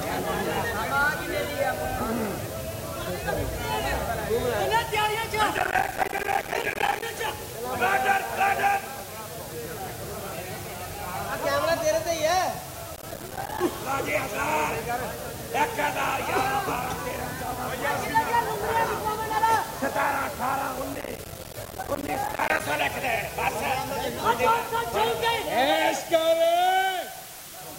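A constant, even hiss sits under the sound from start to finish, only about 15 dB below the signal, yet with no distortion. This is low bit depth with dither, which points to roughly 6 bits: dither added before rounding turns the coarse quantization error into steady white noise.

Bursts of gritty, tearing crackle ride on the sound from 5.57 to 7.02 s, 12.96 to 13.61 s and 20.93 to 22.61 s. This is processor overload crackle. The processor repeatedly missed its deadlines for buffers a few milliseconds long, leaving many hard-edged silent gaps in a row.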